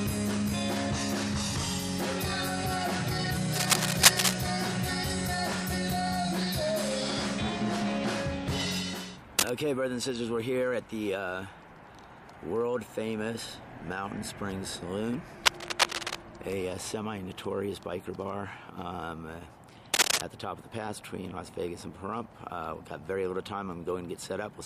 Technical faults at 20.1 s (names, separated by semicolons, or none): cable scratch noise